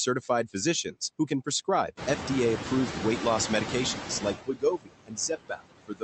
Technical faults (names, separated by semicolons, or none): noise suppressor artifacts; speech cut by the noise suppressor